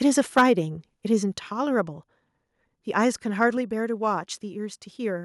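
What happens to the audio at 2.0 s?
Nothing goes wrong at 2.0 s; the speech carries on there without any audible dropout, click, distortion or other fault.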